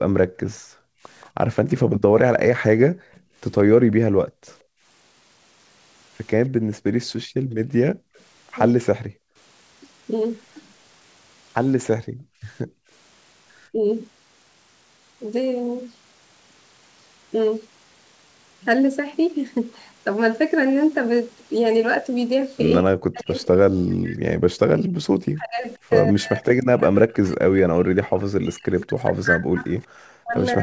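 From the start to 12.89 s, background gated by the echo canceller: the canceller clamped the microphone while the far end played, so the room sound drops away by up to about 40 dB in dips, roughly five seconds in all, then returns.

From 0.54 to 4.56 s comes an echo leak, likely from a loudspeaker echo the canceller failed to remove. A faint copy of the speech trails 177 ms behind at about 30 dB down. A brief scrap recurs at 8.16 to 8.23 s, near 40 dB down.

Speech suppressed in double talk follows, likely because the canceller mistook overlapping talk for echo and ducked both. The voice sinks by around 40 dB at 3.73 to 4.09 s, dips by about 10 dB at 13.72 to 13.84 s, and from 22.8 s to the end is pushed down hard, while the 177 ms echo leak resurfaces from 27.09 to 29.85 s.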